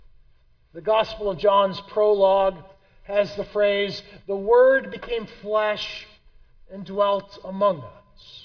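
Nothing goes wrong anywhere in the clip, so there's no fault to point to at any moment.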